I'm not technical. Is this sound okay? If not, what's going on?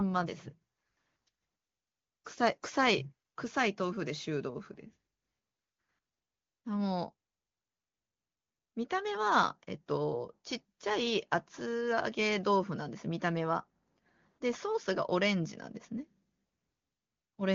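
Yes, the speech comes through an AMR wideband (HD Voice) phone codec working as designed, and no problems stand out.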